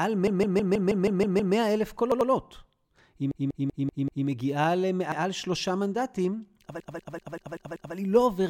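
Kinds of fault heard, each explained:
Repeated frames: A run of compressed frames was delivered more than once, so the decoder replays the same stretch and the speech stutters in a loop. A 160 ms block plays 8 extra times from 0.27 to 1.55 s, adding 1.28 s. A 192 ms block plays 5 extra times from 3.31 to 4.27 s, adding 0.96 s. Another 192 ms block plays 6 extra times from 6.80 to 7.95 s, adding 1.15 s. Together these lengthen the clip by 3.39 s.
Repeated buffer: The playback device ran short of fresh audio and replayed its last buffer, so a short piece of speech sounds again with a hard join at each repeat. Each repeated piece lasts about 93 ms, which fits a 4096-sample buffer. The first repeat, from 2.12 to 2.30 s, plays 2 extra times. The second, from 5.12 to 5.21 s, plays once extra. Essentially no audio is lost around either one.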